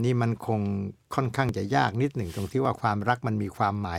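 At 1.49 s and again at 2.65 s the sound of the speech jumps slightly forward with no gap of silence. Each jump comes from a dropped buffer (overrun): the likely cause is that the recording software fell behind and the hardware overwrote a block of samples before they were read. Around 5 ms of audio vanishes each time, and the two edges are spliced directly together.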